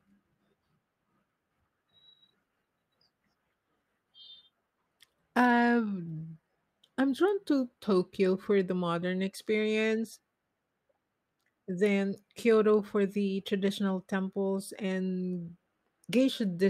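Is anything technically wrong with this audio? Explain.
No, nothing technically wrong shows up anywhere in this speech recording.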